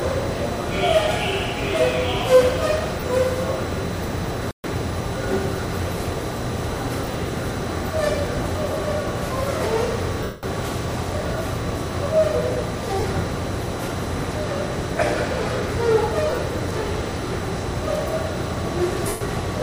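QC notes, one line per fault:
3.00–3.03 s, 7.04–7.14 s, 10.23–10.43 s, 13.00–13.04 s, 16.30–16.38 s, 19.08–19.21 s: lost LE Audio frames. Gaps of 30, 50, 200, 40, 60 and 130 ms. At 7.04 and 16.30 s the gaps are scattered, with the longest run about 30 ms. The LC3 decoder repeats the last spectrum with random signs, so tonal parts turn into a brief noisy smear. The 200 ms and 130 ms gaps fade into silence. The gap lengths fit 10 ms frames. On a spectrogram, harmonic lines blur into broadband haze, and the waveform envelope decays.
4.51–4.64 s: playback stall. The sound stops in mid-flow for about 131 ms, then resumes. The likely cause is a buffer underrun or a blocked player thread. On the waveform this shows as a flat run of silence with abrupt edges. On a spectrogram it appears as a clean vertical blank band across all frequencies. Unlike the frame losses, there is no smear or fade-out, just a hard cut to nothing and back.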